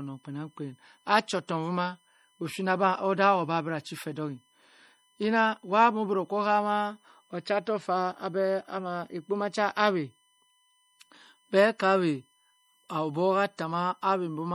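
Throughout the speech, current drawn by the USB bus in 1 ms frames leaks into the audio path through power or ground, producing USB whine: a fixed-pitch tone at 1 kHz, strongest at its 3 kHz multiple, sitting about 40 dB below the speech.

Also across the whole clip, the likely cause is MP3 compression at a low bitrate, around 48 kbps. Short of bits, the encoder zeroes weak frequency lines that flicker on and off between frames, leaving a plainly audible watery or swirly texture on the speech.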